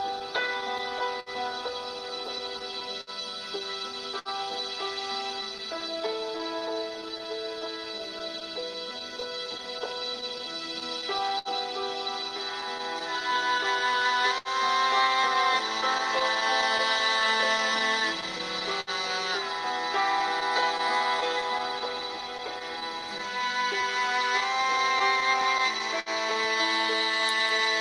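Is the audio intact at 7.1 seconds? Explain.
No. The moment at 7.1 s sits inside the scattered short gaps that run from 0.19 s to 27.64 s. Roughly a hundred small holes, none much longer than 70 ms, are patched by extending the preceding sound, leaving brief ticks, smears and hiccups.

Clock drift between sender and receiver also affects 7.1 s, as it runs through the whole clip. The sender's clock runs about 5 percent slow, so the receiver's buffer keeps draining and it repeats short pieces, producing small timing stumbles at uneven intervals.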